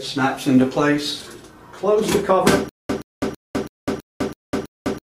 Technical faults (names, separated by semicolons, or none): stutter with silent gaps